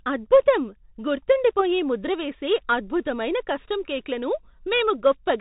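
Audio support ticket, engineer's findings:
Bluetooth CVSD headset codec, throughout the speech. Band stops near 4 kHz, granular hiss under the voice, scratchy sibilants, audible distortion on loud bright sounds where the 1-bit up/down delta stream's adaptive step lags. Damage fits a 64 kbps CVSD link.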